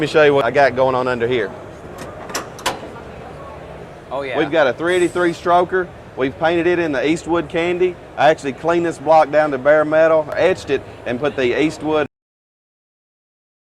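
At 12.06 s the sound stops mid-event and drops straight to digital silence with no decay: a cut-off end, where the final buffers were never written.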